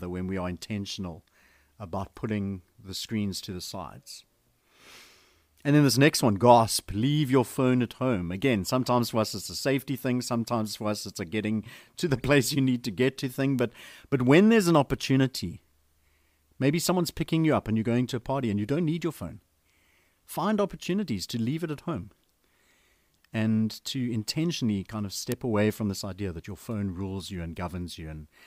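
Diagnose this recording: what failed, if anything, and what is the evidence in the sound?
A bit error spike on the digital path, either in memory or on a digital link, flipped a single bit in the speech samples twice. One tick comes at 13.59 s, just after "to get to thing". A second, about 12 dB louder, comes at 25.32 s, between "to intentionally kind of" and "away from this idea". Each is a sharp, broadband click that has nothing to do with the voice. The sample value jumps by a power of two and snaps straight back, so each spike lasts only a sample or two.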